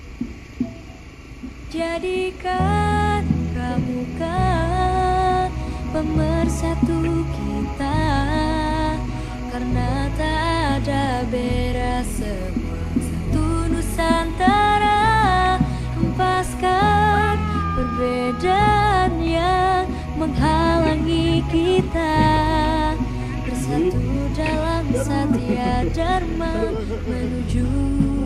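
No technical faults are audible.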